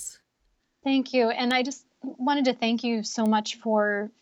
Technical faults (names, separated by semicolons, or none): bit error spike